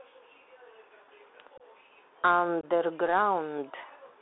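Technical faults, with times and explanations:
Throughout: Bluetooth CVSD headset codec. The link runs the narrowband one-bit-per-sample delta codec, which fits a 64 kbps stream. Everything is confined to roughly 300 Hz to 3.6 kHz, s sounds turn scratchy, loud bright moments overload the adaptive step and distort, and a granular hiss sits underneath.
1.58–1.62 s and 2.61–2.65 s: unconcealed Bluetooth headset packet loss. Each time a few voice packets, about 22.5 ms of audio, fail to arrive and nothing fills them, so the speech drops into a hard-edged hole and resumes briefly quieter.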